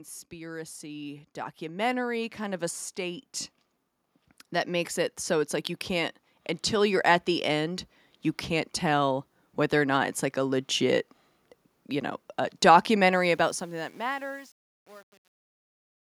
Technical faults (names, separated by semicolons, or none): automatic gain rising; truncation distortion on a fade